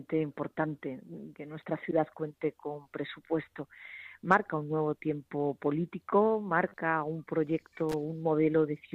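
At 7.89 to 7.94 s a brief loose connector crackle appears: a worn contact breaking intermittently chops the signal into a short, irregular scratchy burst.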